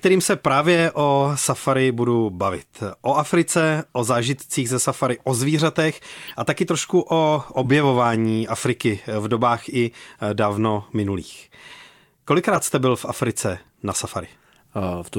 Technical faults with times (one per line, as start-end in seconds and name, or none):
4.69-4.71 corrupt frame decoded
6.27-6.31 corrupt frame decoded
7.63-7.68 corrupt frame decoded
12.51-12.58 corrupt frame decoded